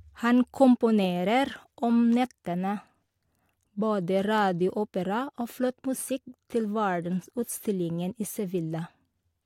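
No technical faults are audible in this recording.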